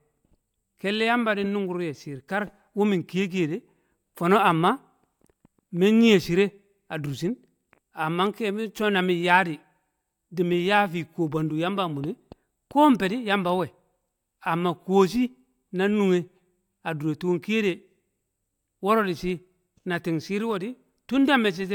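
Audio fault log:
Nothing stood out on listening to this speech recording.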